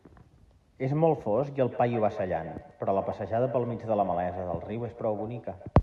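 From about 1.7 s to the end, the speech gets a feedback echo between two devices. A second device in the room is replaying this mic's signal and it's being picked up again. Each word comes back at roughly 150 ms, thinner and ringier, peaking about 13 dB below the speech.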